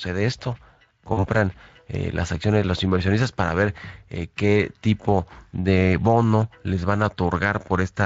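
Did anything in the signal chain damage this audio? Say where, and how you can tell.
Yes. Throughout, the speech sounds hoarse and grainy. That is Speex codec damage: the CELP coder has too few bits for the excitation, so detail becomes noise. The quality fits a Speex setting around 20 kbps.

At the network stage, from 1.13 to 1.28 s, the speech smears into a fading buzzy tone or coloured noise, then sounds weak and rough before recovering. This is VoIP packet loss concealed by the speech codec: about 40 ms was lost, consistent with two dropped frames. The decoder extrapolated its last pitch and filter, and the damage persisted after packets returned.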